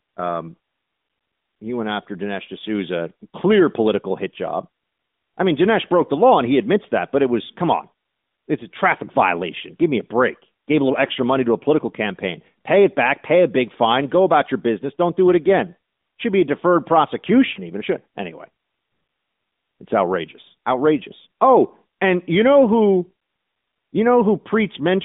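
At 17.54 to 17.61 s, lost AMR speech frames cause a short dip or warble. A single 20 ms frame failed its radio checksum, so the decoder briefly repeated the previous pitch and vocal tract settings at reduced gain. The result is a smeared hiccup rather than a hard silent gap or click, and it sits on narrowband audio, light codec coloration, and a 200 to 3700 Hz band.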